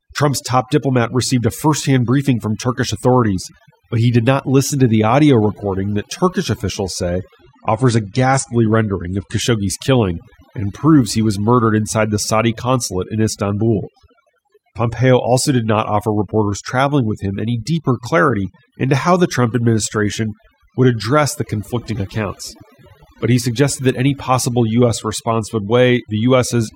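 Overdone noise removal runs through the whole speech recording. The noise reducer was set too hard. It cuts frequency bands that sit near its noise estimate, taking quiet parts of the voice with them. Gaps fall to near silence with twinkling specks.

From 7.41 to 9.41 s, right after "officials say" and until "killing and proves he", an adaptive stream drops to a lower bitrate. The connection slowed, so a leaner version played. Nothing sounds above 9.8 kHz, which fits a switch from about 96 to 32 kbit/s AAC. The treble dulls, artefacts rise, and quality shifts abruptly without any gap.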